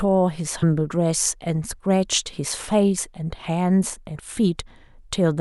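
At 0.62, 2.97 and 4.14 s, compressed frames are skipped: the speech jumps ahead about 150, 70 and 50 ms, each join a brief smeared blip.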